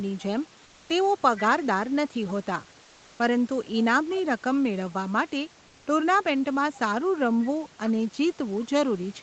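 From 0.63 to 0.89 s and again from 2.83 to 3.19 s, the room background gives way to comfort noise: a smooth, featureless hiss with none of the room's texture, at roughly the same level (about 1 dB quieter the first time, unchanged the second). The likely cause is discontinuous transmission, consistent with Opus DTX, where the sender pauses and the receiver synthesises noise. Unlike a noise gate, the pause never drops to silence.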